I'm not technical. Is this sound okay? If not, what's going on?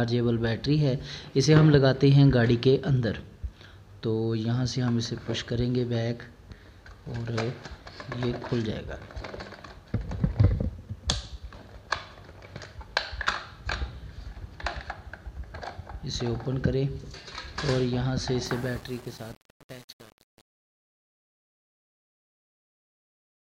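No. From about 18.46 s to the end at 23.49 s, the fade-out has truncation distortion. The fade itself is smooth, but as the sound gets quieter it turns grainy instead of thinning evenly to nothing. That happens when the volume is lowered digitally with too few levels to work with (this fits roughly 7 bits), so the quietest parts collapse into crude steps. Unlike a harsh clipping fault, it gets worse as the sound gets softer, not louder.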